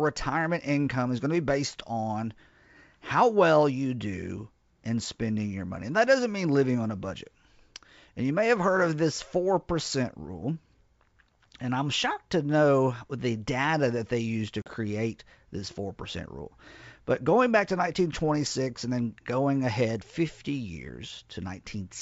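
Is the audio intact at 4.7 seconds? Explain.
Yes, the audio is intact at 4.7 seconds, with the speech carried through G.722 wideband telephone coding at 64 kbit/s and no fault at that moment.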